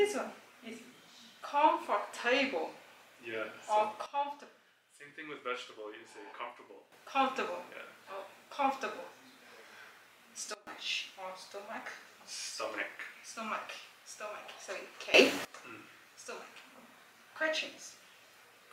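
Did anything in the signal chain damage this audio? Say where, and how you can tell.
Yes. A digital gain stage, likely a level setting applied with no ramp, produced a sudden gain jump three times. The level drops by about 12 dB from 4.06 to 6.92 s, by about 20 dB from 10.54 to 10.67 s, and rises by about 19 dB from 15.14 to 15.45 s. The sound and the background noise shift together instantly at each edge.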